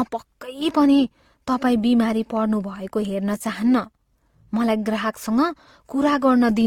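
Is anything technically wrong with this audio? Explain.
Yes. Transcoding between lossy codecs runs throughout the speech: it likely passed through a low-rate codec resembling Opus near 24 kbit/s, then something like HE-AAC near 40 kbit/s, each adding its own artefacts, with nothing above 18.5 kHz.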